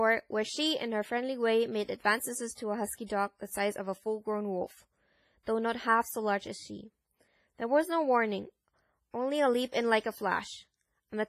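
Throughout the speech there is heavy ringing, washy coding damage, with a hiss that breathes with the signal and nothing above 15.3 kHz. This is likely WMA compression, which fits an early WMA encoder at about 24 kbps spreading quantisation noise over long blocks.

From 3.06 to 3.10 s, a short hiss of about 34 ms runs ahead of an attack, softening its onset. This is pre-echo: the codec spread the noise meant for the loud attack across its whole block, including the quiet moment before it.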